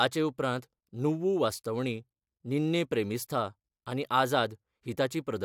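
No technical faults are audible anywhere in the speech.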